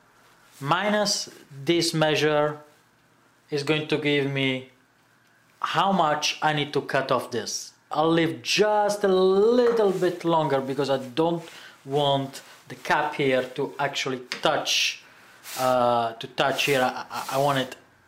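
Nothing goes wrong anywhere in this one: there are no dropouts, glitches or other faults to point to at any moment in the audio.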